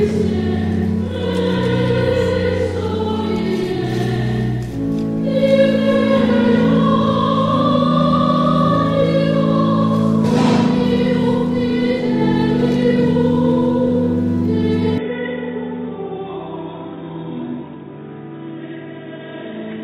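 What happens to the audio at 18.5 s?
At 18.5 s the recording is inside a stretch, from 14.98 s to the end, where the input was likely switched to a poorer device. With no gap at the switch, the sound suddenly loses everything above 3.8 kHz, turning dull and boxy. It also drops a few decibels in level, and a faint new background noise appears, sitting far below the signal, carrying the other device's own tone and noise until the end.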